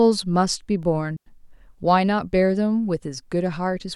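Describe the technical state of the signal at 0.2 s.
Around 0.2 s the speech signal is intact, with no fault audible at that moment.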